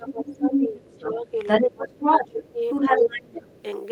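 A speech recording with two intertwined echo-canceller problems running through nearly its whole length. Speech suppressed in double talk pulls the talker down at 0.0–0.77 s, 0.93–1.37 s, 1.6–1.98 s, 2.25–2.63 s and 2.98–3.54 s. Most dips are around 10 dB, but the one at 1.6 s goes deeper and the one near 3 s is the deepest, close to 20 dB. The likely cause is the canceller failing to tell near-end speech from loudspeaker echo while both sides were active, so it attenuated everything. At the same time, the other side's voice is leaking through at 0.06–1.71 s, 1.9–2.52 s and 2.69–3.63 s. It sits a little below the talker in the first and last stretches and somewhat further down in the middle one. This residual is likely far-end audio from the device's loudspeaker that the canceller did not fully subtract from the microphone signal. It overlaps the suppression windows, which fits the same double-talk confusion.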